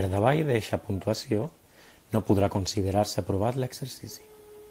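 From 1.15 s to 3.09 s the speech turns rough and watery before recovering. This is a call bitrate drop: the bandwidth estimate fell, halving the encoder's rate from 32 to 16 kbps for about 1.9 s, so everything was coded more coarsely.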